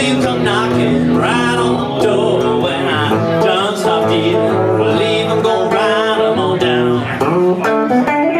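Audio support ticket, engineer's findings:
Gain pumping, throughout the 8.4 s clip. Gain swings by roughly 5 dB, ducking under each loud sound. Loud and soft parts squashed together. Likely cause: input gain set far too high, with a fast limiter or compressor clamping each peak. Waveform: flattened envelope, noise floor rising between peaks. Spectrogram: broadband background brightening in gaps, darkening at each onset.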